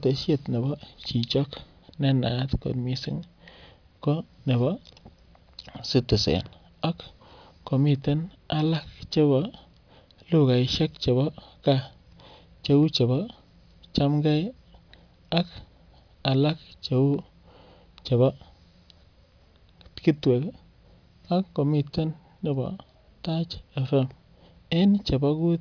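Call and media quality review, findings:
No technical faults were found in the speech signal on this call, and nothing in the capture or transport path calls for follow-up.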